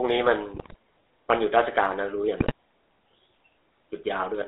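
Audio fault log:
throughout GSM full-rate codec: The speech runs through a vocal-tract model driven by sparse, regularly spaced pulses at a rate that points to 13 kbps, inside a 300 Hz to 3.7 kHz line band, so the voice comes out plainly buzzy and gravelly, with no top end.
0.54–0.76 s and 2.40–2.52 s GSM bit errors: Roughly 4% of bits arrive flipped, corrupting filter, pitch and gain values in a run of consecutive frames, so the spectrum lurches and the level spikes, breaking the voice into squawks, pops and gargling for about 0.22 s, then 0.12 s.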